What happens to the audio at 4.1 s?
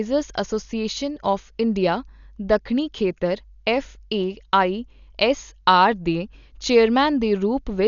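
At 4.1 s the speech carries what is likely Dolby Digital compression, heard across the whole clip rather than at that moment alone. Nothing sounds above 6.9 kHz, which fits a starved bitrate near 48 kbps. With so few bits, many frequency lines lose their detail and get refilled with noise, so the voice sounds dull and a rough, fluttering hiss clings to its tones.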